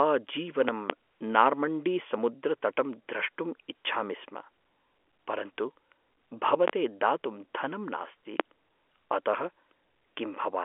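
Loud pops, from 0.69 to 0.93 s as a quick pair, then single ones at 6.68 to 6.71 s and 8.40 to 8.43 s, peaking roughly 20 to 25 dB above the speech. Each is likely a sudden voltage spike, from a plug, switch or static discharge, landing on top of the telephone-band speech, which carries on underneath.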